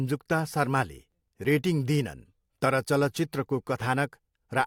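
From 1.12 to 1.45 s the processor falls behind its audio deadlines, producing processor overload crackle. It misses roughly seven buffers of around 5 ms each. Nothing fills the missing blocks; they are simply skipped, so each one leaves a tiny hard-edged hole in the speech. Strung together, the holes sound like a gritty, tearing crackle over the voice that clears just before "रेटिङ दिइनन् तर चलचित्रको".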